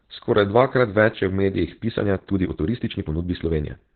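Throughout, Opus voice compression in SILK mode limits the band to about 4 kHz, consistent with roughly 8 kbps, leaving the speech muffled, hoarse and slightly robotic. From 1.74 s to the end, a time-stretched section plays about 1.35 times faster at unchanged pitch, sounding rushed, likely from dropped segments.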